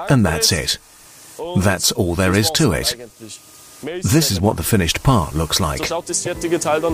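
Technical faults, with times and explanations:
6.25–6.27 s, corrupt frame decoded: a single compressed frame arrived with damaged bits and the decoder played it rather than concealing it. Misread codes and gain values sent energy to frequencies that have nothing to do with the surrounding sound, producing a short, sharp blip peaking at around -10 dBFS. On a spectrogram it shows as an isolated vertical block of scattered energy about 22 ms wide; on the waveform, a brief spike standing out from its neighbours.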